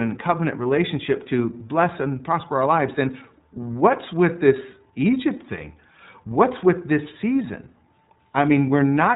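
Throughout, the speech sounds muffled, rough and slightly synthetic, with nothing above 4 kHz: iLBC codec damage, consistent with 30 ms frames at around 13 kbps.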